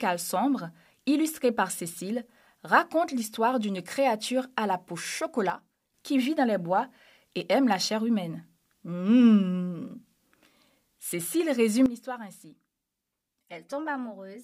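Sudden gain jumps at 5.5 s and 11.86 s drop the speech and background noise together, by about 8 dB until 5.94 s, then about 12 dB to the end, likely from a gain change applied without a ramp.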